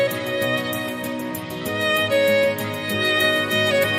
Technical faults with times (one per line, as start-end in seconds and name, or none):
none